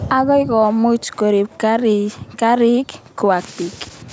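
No technical faults occur in this speech, which has only the normal low-bass trimming of call microphone processing.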